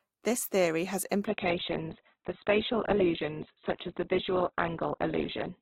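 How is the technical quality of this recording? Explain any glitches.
Quality takes a clear hit partway through. From 1.25 s, right after "theory has", to the end, the adaptive stream drops to a lower bitrate: the treble abruptly cuts off above 4.2 kHz, which fits the connection slowing enough to force a much lower-bitrate Opus version, with no gap at the switch.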